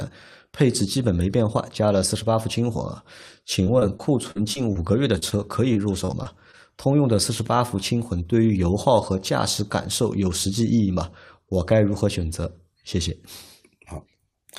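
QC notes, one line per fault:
3.63–4.77 s and 5.73–6.55 s, repeated packet loss (robotic sound): audio drops out again and again across each stretch, with six holes in the first run (about 140 ms missing, longest 42 ms) and five in the second (about 100 ms missing, longest 26 ms). Each hole is patched by extending the preceding sound, which covers about 12% of each span. Patch after patch in close succession gives the choppy texture. That repetition across a span is what separates this fault from an isolated dropout.
5.19–5.24 s and 5.30–5.33 s, short concealed packet loss: two single holes, each about 20 ms of missing audio, filled with 26 ms and 18 ms of synthesized continuation of the last sound before fading back into the real signal. Each is heard as one brief smear or wobble between 5.19 and 5.33 s. Unlike the robotic runs, each hole here stands alone rather than following a string of others.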